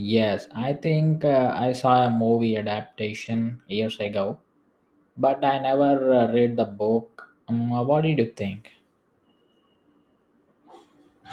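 From 3.21 to 3.47 s, just before "years ago", packets were lost and the decoder filled them with a lost packet rebuilt from error correction. Each following packet carried a low-bitrate duplicate of the missing one, and playing those duplicates left no gap in the speech. About 140 ms of audio comes from these coarse copies, which fits roughly seven separate lost packets, and that stretch sounds rougher and noisier than the surrounding speech.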